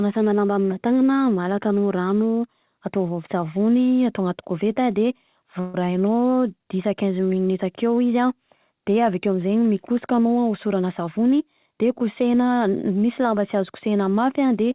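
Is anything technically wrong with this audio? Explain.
Yes, there are two faults in this speech clip, heard through a narrowband call path whose spectrum stops at 4 kHz.

At 5.60 to 5.76 s, just after "koveta de", there is a call audio freeze. The last sound is held as a buzz or hiss for 138 ms, with no silence, likely because delayed packets left the jitter buffer empty while the receiver extended what it had. Nothing is lost; the speech resumes where it stopped, now 138 ms later. On a spectrogram this shows as a short block of flat, repeating harmonics. On the waveform it is a run of near-identical cycles.

From 10.53 to 12.21 s there is a jitter buffer speed-up. The receiver had built up excess buffered audio and trimmed it by cutting out short pitch-period-length pieces again and again, removing roughly 150 ms in total. The passage plays at about 108% speed with unchanged pitch, so it sounds hurried. 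A spectrogram shows syllables and gaps compressed in time with harmonic spacing intact, and the waveform shows small splices between cycles.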